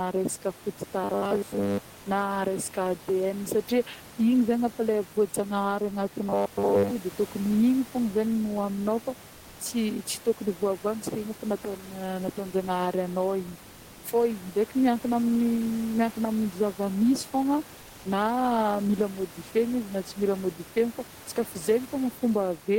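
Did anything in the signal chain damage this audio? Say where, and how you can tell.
Yes, at the buffer stage: robotic sound from repeated short buffers at 1.04–1.89 s and 6.25–6.91 s. The fixed 100 Hz buzz fits a 10 ms block likely looping while most of the real speech got skipped.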